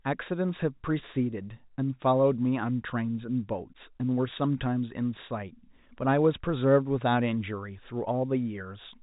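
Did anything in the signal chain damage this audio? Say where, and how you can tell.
No, nothing in the signal chain damaged this speech. It has the narrow band of G.711 telephone coding, with nothing above 4 kHz and a faint quantisation hiss that rises and falls with the level, which is how that telephone path normally sounds.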